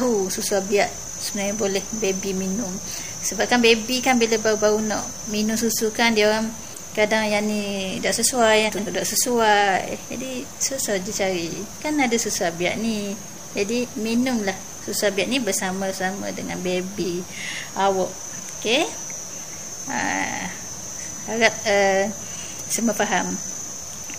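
Low bit depth without dither runs through the whole clip. The likely cause is samples truncated to very few bits, about 7 by the sound, with no dither. The rounding error tracks the signal at roughly 25 dB below it, so quiet passages turn gritty and grainy.

Frames out of order occur twice. From 8.68 to 8.88 s, two adjacent blocks of about 93 ms play swapped. From 16.98 to 17.10 s, two blocks of about 46 ms are exchanged. Each sounds like a brief garbled flutter, and no time is lost.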